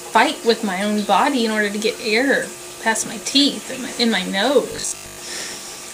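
The audio turns into robotic sound from repeated short buffers between 4.72 and 5.18 s. A rigid, metallic buzz at 50 Hz appears. The likely cause is audio arriving too seldom, so the player keeps repeating its last chunk. A 50 Hz rate fits a 20 ms chunk, and most of that stretch is repeats rather than new material. Unlike plain dropouts or stutter, there are no gaps; the loop fills in continuously at one fixed rate.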